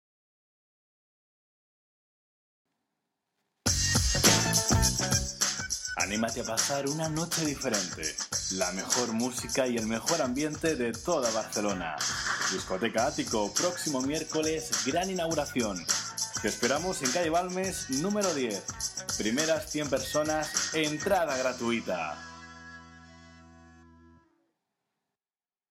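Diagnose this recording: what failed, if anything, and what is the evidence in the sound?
Nothing failed: no stage in the chain, from the analogue wiring through conversion and buffering to playback, leaves any audible trace of a fault in this recording.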